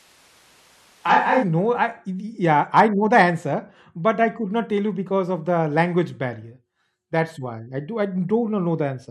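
Right from the start until 1.42 s, the speech sounds roomy and hollow with thin bass, then snaps back to close and full. That's a switch to a distant microphone, likely a far-off camera mic. The level barely changes, and the room noise stays low.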